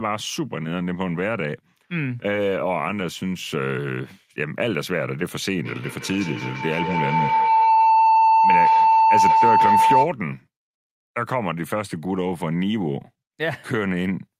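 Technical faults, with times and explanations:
5.65–10.16 s, feedback howl: a tone near 1 kHz swells to about 7 dB above the speech, pulsing every 150 ms or so, as a loudspeaker-to-microphone loop gains level each trip.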